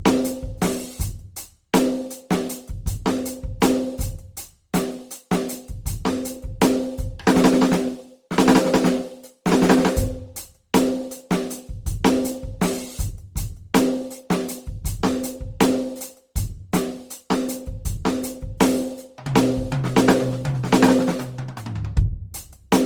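Music, likely re-encoded about seven times through a lossy codec, which fits Opus at 48 kbit/s, causing generation loss throughout: swirly, hollow, smeared sound with blurred attacks.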